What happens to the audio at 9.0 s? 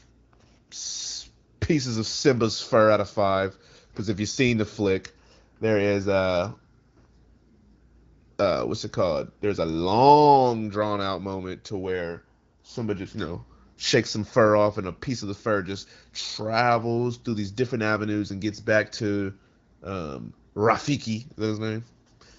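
Nothing goes wrong at 9.0 s: the speech carries on intact, passing through the AMR wideband (HD Voice) codec at 15.85 kbit/s, which leaves only light coding damage and no content above about 7.4 kHz.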